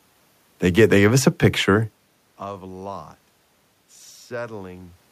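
Nothing stood out on listening to this speech recording: the background noise belongs to the room, and the change in level around two seconds in is the talker shifting position relative to the microphone.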